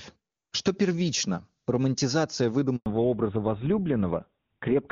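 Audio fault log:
2.76–2.86 s handover gap: the sound fades out within a few tens of milliseconds and a 100 ms silence follows before audio resumes. The call was passed from one network to another, no speech frames arrived during the switch, and that moment is lost.
2.86–4.91 s fallback to narrowband: from here to the end the sound is duller and rougher, with nothing above 4 kHz, unlike the clear HD Voice before the gap. The call dropped to an older narrowband codec, which fits GSM full rate, so the upper band disappears.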